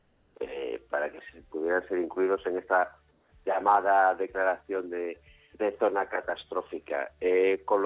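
Comfort noise in place of the background occurs at 0.0–0.35 s and 3.11–3.32 s: the real background becomes a steady, featureless noise about 2–3 dB quieter, likely from discontinuous transmission on a call path that cuts off at 4 kHz.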